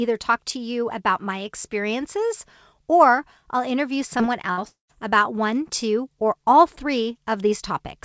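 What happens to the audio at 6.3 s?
Nothing goes wrong at 6.3 s: the speech passes through intact, carrying the same call-path character as the rest of the clip, with nothing above about 8 kHz.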